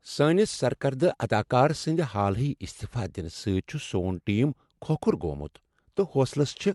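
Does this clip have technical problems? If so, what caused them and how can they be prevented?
Yes. Throughout the clip the speech carries transcoding between lossy codecs: nothing is present above 11.8 kHz, and two kinds of coding artefact are heard together. The likely cause is an MP3 encode followed by an AAC-LC re-encode, which fits roughly 96 kbit/s then 64 kbit/s. The second encoder spends its bits reproducing the first one's artefacts and adds its own, while the lowest band limit in the chain stays. To prevent this, encode once from the original uncompressed source.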